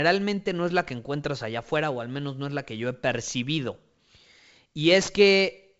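No faults are audible in the speech, which carries the usual character of G.722 wideband telephone coding at 64 kbit/s, with speech clear up to about 7 kHz.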